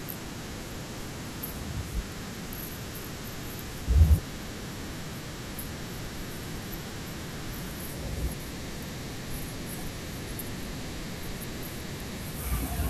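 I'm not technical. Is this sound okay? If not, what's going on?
Yes, it's fine; nothing wrong can be heard.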